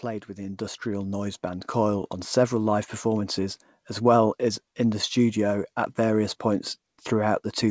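No technical faults can be heard in this recording.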